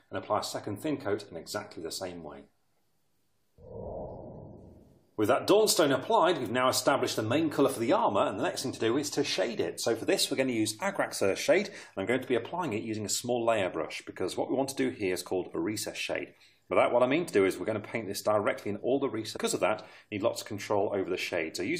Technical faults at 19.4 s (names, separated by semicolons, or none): stream segment skipped